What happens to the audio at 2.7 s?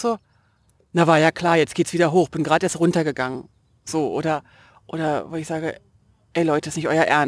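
At 2.7 s the speech carries aliasing, which runs through the whole clip. The content above 11 kHz was folded back into the band, consistent with a downsample to 22 kHz without an anti-alias filter. Sibilants sound gritty and metallic, with foldback some 25 dB below the signal.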